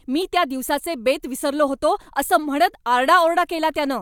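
Nothing in this speech recording stands out as a technical fault, so there's no problem moment to point to anywhere in it.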